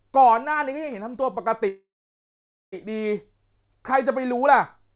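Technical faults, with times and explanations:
1.68–2.74 s, call audio freeze: the speech halts, a short fading buzz drops to about 0.87 s of silence, then resumes where it stopped with nothing lost, now about 1.04 s late. Likely cause: delayed packets emptied the jitter buffer, so the receiver stretched the last sound.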